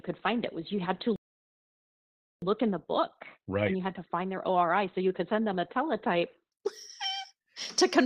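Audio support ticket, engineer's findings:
Adaptive stream starting at a low bitrate, 0 to 6.52 s: treble missing or synthetic and stronger codec artefacts, consistent with a low-bitrate Opus start near 12 kbit/s. Steps up cleanly, no gap, around 64 kbit/s.

Playback stall, 1.16 to 2.42 s: output silent for about 1.26 s mid-flow. Likely buffer underrun or blocked player thread.

Time-compressed catch-up, 2.42 to 5.42 s: audio hurried at 1.25x with pitch unchanged. Player cutting and cross-fading small segments to drain the backlog after the stall.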